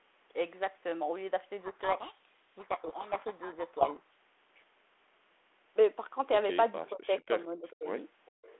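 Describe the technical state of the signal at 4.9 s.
At 4.9 s the speech is intact, carried in the narrow telephone band of the 32 kbit/s G.726 link with no fault at that moment.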